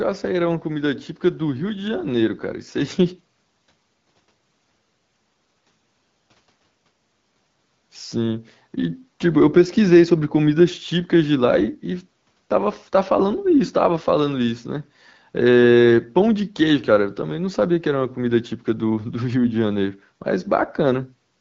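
No faults heard: the speech comes through the AMR wideband (HD Voice) path at 12.65 kbit/s with only the light coding texture expected at that rate.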